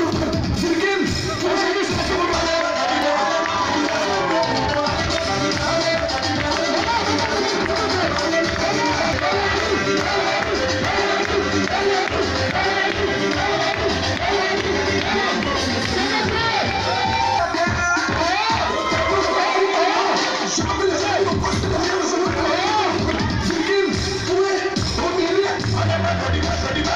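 At 3.02 s and again at 9.04 s, a gap between stream segments leaves a hard-edged hole of about 4 ms; six seconds apart, it is timing drift at segment joins rather than lost audio. From 18.86 s to 20.56 s, a doubled audio track trails about a fifth of a second behind, roughly 5 dB quieter and without reverb decay, likely a second, slower capture path.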